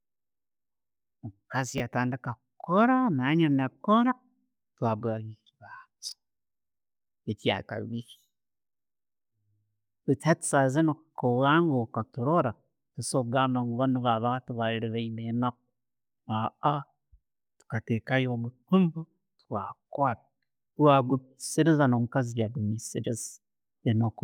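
At 1.78 to 1.80 s and again at 6.09 to 6.12 s the speech has chunks out of order. A 10 ms block arrives late and plays after its successors, one position late at first, two the second time. The speech stutters into a brief jumbled blip. The waveform shows abrupt steps at each hard join. A spectrogram shows thin vertical broadband lines there, with harmonic traces jumping out of continuity.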